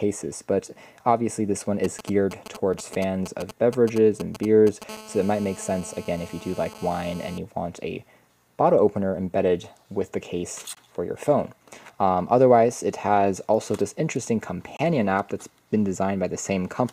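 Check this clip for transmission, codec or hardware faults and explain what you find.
There are three problems here: GSM interference in two forms, plus small gaps between stream segments.

From 1.84 to 4.84 s you get GSM signalling bursts. A 2G phone nearby is sending short groups of transmissions, not a continuous stream, and something in the audio chain is rectifying those radio pulses into the signal. The result is a galloping dit-dit-dit of short buzzes at roughly 217 Hz. They're fairly prominent, sitting only about 10 dB or so under the sound itself.

Right after that, from 4.89 to 7.38 s, a phone is in a call and the interference becomes a steady GSM phone buzz. The handset is now transmitting bursts continuously at 216.7 Hz, and the rectified pulses come out as a hard, raspy tone full of harmonics. It has nothing to do with the programme material. It sits at about 20 dB below the signal, so it's quieter than the earlier bursts but constant.

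Finally, there's a gap between stream segments every 4 seconds: at 2.73 s (3.4 ms), 6.74 s (11.8 ms), 10.75–10.77 s (19.3 ms) and 14.77–14.79 s (22.6 ms). The timestamps of neighbouring 4-second segments don't quite meet, so the player pads the difference with silence. Each one is a hard-edged dropout, and they get longer as the clip goes on. No audio is actually lost, though. Time is just inserted.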